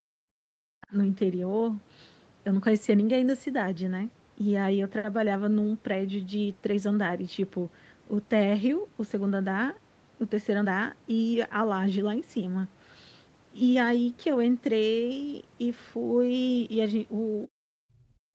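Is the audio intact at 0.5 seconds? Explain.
No. Speech suppressed in double talk runs from 0.00 to 0.92 s: the speech drops by roughly 40 dB, likely because an echo canceller mistook overlapping talk for echo.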